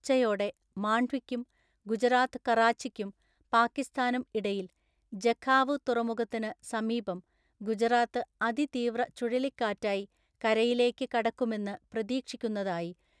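Listening through this speech recording, nothing stood out as a technical problem.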